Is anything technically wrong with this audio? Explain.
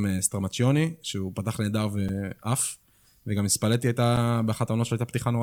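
Yes. Two sharp ticks interrupt the speech, at about 2.09 s and 4.17 s. Each is a block of digital silence lasting 5 ms, where the sound cuts out and back with no fade. This points to an audio buffer not being filled in time.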